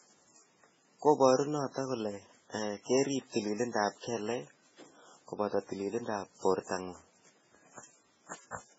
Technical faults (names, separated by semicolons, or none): MP3 compression